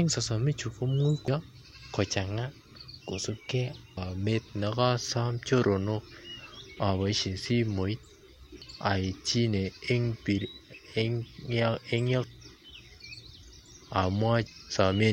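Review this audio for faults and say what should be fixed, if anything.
Five short bursts of damaged data in a compressed stream interrupt the speech at 1.28 s, 3.97 s, 8.62 s, 12.24 s and 14.47 s. Each is a brief chirp or blip. At these points the decoder read corrupted bytes in a frame, lost synchronisation and had to hunt for the next valid frame header, so the output glitched momentarily before decoding resumed. The damaged frames should be restored from an intact source or re-encoded. To prevent this, transfer and store the compressed file with checksums or error-protected transport so corrupted frames are caught before playback.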